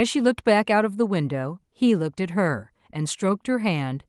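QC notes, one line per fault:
No faults: the speech arrives through a call codec path whose bandwidth stops at 12 kHz, which fits Opus at around 32 kbps, and the signal shows nothing beyond what that path normally produces.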